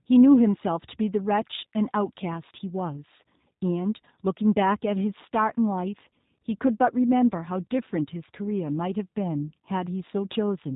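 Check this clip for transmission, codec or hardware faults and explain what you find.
The clip carries one codec fault, audible from start to finish.

G.729 codec, throughout: the speech is rebuilt from a vocal tract filter, a pitch predictor and a few pulses per 5 ms subframe, at a rate that fits 8 kbit/s. Nothing passes above 4 kHz, so the speech sounds band-limited, slightly rough and synthetic.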